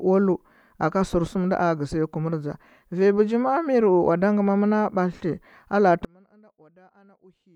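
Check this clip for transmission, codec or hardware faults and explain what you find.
One fault appears near the end of the speech. From 6.05 s to 7.56 s, just after "bathti a la’a tɚ", the level collapses by about 33 dB to a faint residue, likely because one channel is inverted and cancels when summed to mono. The waveform shrinks almost flat and the spectrogram nearly empties.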